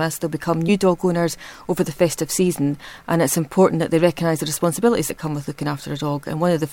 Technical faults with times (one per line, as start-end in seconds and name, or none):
5.09 compressed frames skipped